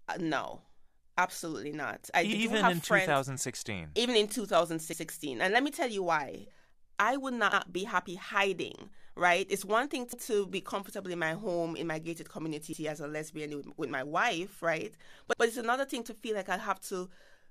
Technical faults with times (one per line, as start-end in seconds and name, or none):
4.93-5.03 overlapping chunks
7.53-7.63 overlapping chunks
10.13-10.23 overlapping chunks
12.73-12.83 overlapping chunks
15.33-15.43 overlapping chunks